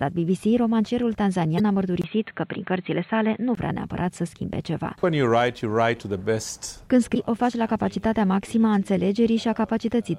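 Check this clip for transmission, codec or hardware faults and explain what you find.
Three faults are audible, of two kinds.

Damaged data in a compressed stream, at 1.56 to 1.60 s and again at 7.12 to 7.16 s: corrupted bytes make the decoder misread frames and hunt for the next valid header, so each spot gives a brief glitch lasting about 40 ms.

Input switched to a poorer device, from 2.02 to 3.57 s: a 20 ms gap opens at 2.02 s, then the sound turns dull and boxy, with nothing above 4.2 kHz and a faint new noise floor well below the signal. The level barely changes. That narrowed band likely comes from a lower-grade input taking over, until full bandwidth returns at 3.57 s.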